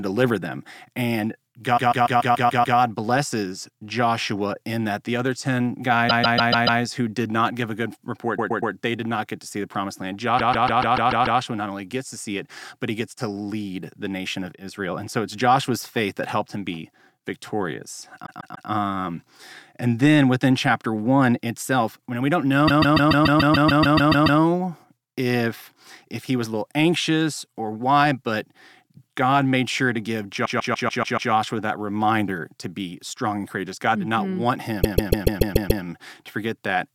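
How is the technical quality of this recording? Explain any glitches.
The recording is marred by repeated frames: the speech stutters, replaying the same short block over and over at 1.77–2.77, 6.09–6.81, 8.37–8.73, 10.38–11.39, 18.25–18.69, 22.67–24.40, 30.45–31.31 and 34.81–35.82 s. Each loop is 144 ms (120 ms at 8.37 s), which fits a run of a few compressed frames being written again. Unlike dropout concealment, the content repeats exactly and the clip gets longer, here by up to about 1.7 s per event.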